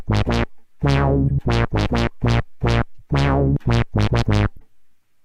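Corrupt frames were decoded at 1.28–1.31 s, 2.99–3.01 s and 4.56–4.62 s. Flipped bits sent energy to the wrong frequencies for a few frames each time, giving a short chirp or noise burst. The first is loud, the later two faint. The last also skips about 18.7 ms of audio. Unlike a dropout, the sound isn't silenced or smoothly patched. Foreign energy is added.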